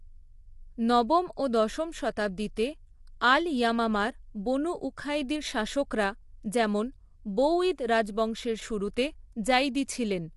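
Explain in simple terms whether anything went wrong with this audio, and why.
Throughout the speech, the voice sounds rough and grainy, with a hiss between its tones and nothing above about 11.6 kHz. This is likely low-delay AAC compression, the kind used in video calls. Unlike simple muffling, it adds graininess rather than just dulling.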